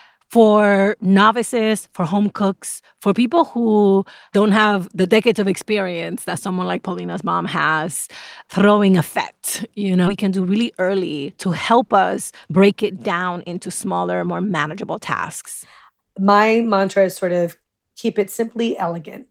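A skip ahead occurs at 10.07 to 10.09 s in this speech. Playback leaps forward with essentially no gap, and about a second and a half of speech is lost. Audio that was already queued behind the lost stretch was played directly after the point before it, so the two sides of the cut are butted together. One phrase runs straight into a much later one, and whatever was said in between is gone.

Jitter buffer speed-up follows from 10.23 to 14.81 s, and again from 15.89 to 16.63 s. The playout queue was holding more speech than its target. To drain that excess, the receiver repeatedly removed tiny pitch-period-sized slices, running the speech at 110% with its pitch unchanged. Roughly half a second is trimmed in the first stretch and only a few tens of milliseconds in the second. Both passages sound rushed, as though the talker suddenly quickened.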